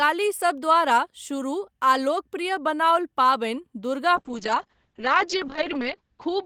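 A call bitrate drop hits this speech clip from 4.16 s to the end: the encoder falls from 32 to 7 kbps, coarsening detail and cutting bandwidth from 20 kHz to 8 kHz, so it turns muffled and rough.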